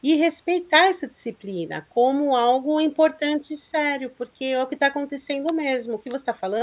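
No technical faults are audible.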